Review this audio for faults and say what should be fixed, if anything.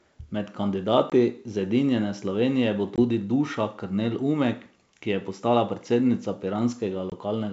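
Packet loss on an ADPCM call hits three times, at 1.10–1.14 s, 2.96–2.99 s and 7.10–7.13 s. Each is a hard-edged 20 ms silence, about one packet. The decoder's predictor and step size drift from the sender's, so the sound returns slightly distorted before settling. Enabling packet loss concealment and some redundancy on the G.722 link would cover these gaps.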